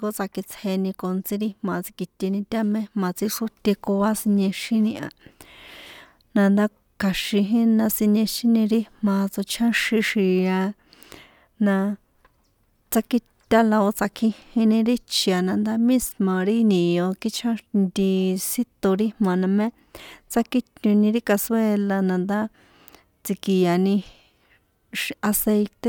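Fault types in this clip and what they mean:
No faults detected in this speech recording.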